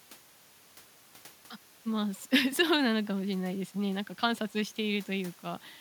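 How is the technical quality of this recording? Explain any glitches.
The technical quality of the recording is sound, with no glitches to explain.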